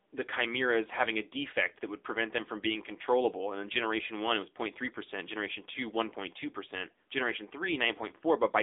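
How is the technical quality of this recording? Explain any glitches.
The recording has been through a low-bitrate mobile phone codec for its whole length. Throughout, the AMR narrowband mobile codec encoded the speech as a coarse vocal-tract model. The band runs only from 300 Hz to 3.7 kHz with nothing above 3.8 kHz, and the plainly audible buzzy, synthetic coarseness fits a low bitrate near 8 kbps.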